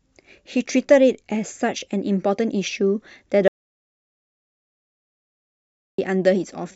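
At 3.48 s the speech cuts off abruptly and the track falls into silence, with no room tone or background hiss underneath, until the sound returns mid-flow at 5.98 s. This is an audio dropout to silence, about 2.5 s long, and whatever was said in that stretch is lost. The likely cause is a brief loss of the input signal, such as a disconnected device, a failed link or a stray mute, while the recorder kept writing silence.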